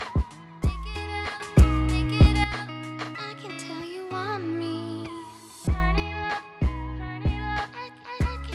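A digital gain setting was likely applied in a single step with no ramp, producing a sudden gain jump from 1.4 to 2.44 s, about 9 dB, and again from 5.8 to 6.0 s, about 11 dB. Sound and background noise leap up together, then drop back.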